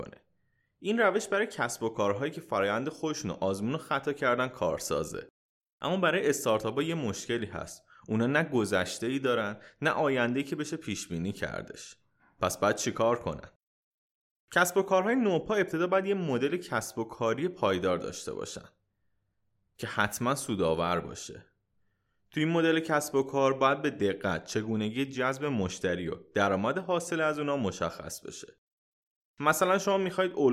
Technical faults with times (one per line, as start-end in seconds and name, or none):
none